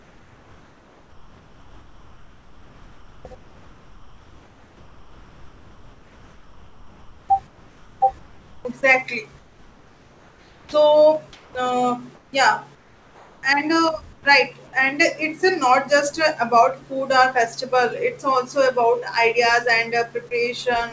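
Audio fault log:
0.0–8.65 s, 9.39–10.73 s, 11.33–11.55 s (ending just before "uh yeah"), 12.15–12.33 s, 12.75–13.43 s (starting right after "uh yeah") and 14.13–14.25 s (ending just before "right and"), comfort noise in place of the background: in each pause the real room sound, sitting about 30 to 33 dB below the loudest parts, gives way to a smooth, featureless hiss that is about 1 to 6 dB quieter. This is likely discontinuous transmission with synthetic noise filled in at the receiver. Unlike a noise gate, the pauses never fall silent, and unlike a plain level dip, the texture of the background changes as well as its loudness. Like the rest of the call audio, which has nothing above 8 kHz, this filler noise is band-limited.
10.66–10.73 s, onset clipped by the voice detector: the first 70 ms of the returning sound are missing, and the filler hiss runs right up to a hard start with no soft lead-in. 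The likely cause is a voice detector that reacted late, so the beginning was never sent. What sets this apart from a dropout is that the gap falls exactly at the onset and is covered by comfort noise, not silence or a repeated fragment.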